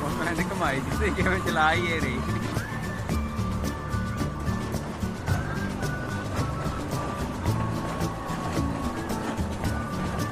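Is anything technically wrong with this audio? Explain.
No, nothing is technically wrong with this audio.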